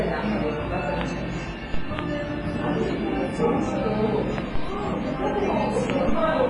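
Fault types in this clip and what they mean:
WMA compression: The whole clip carries ringing, washy smearing and a hiss that rises and falls with the sound. Nothing remains above 10.5 kHz, and the heavy damage likely comes from a WMA encode at a low bitrate, fitting roughly 24 kbps.
Loud pop: Four sharp single pops sit on top of the sound at 1.01, 1.99, 4.38 and 5.90 s, each lasting about 20 ms and peaking around 15 dB above the signal. The likely cause is a plug, switch, static or driver glitch.
DC step: The waveform's zero line jumps at 1.74, 4.56 and 6.09 s, giving a low thump each time while the sound carries on unchanged. The offset then drains away as if through a 2 Hz high-pass, fading within a fraction of a second.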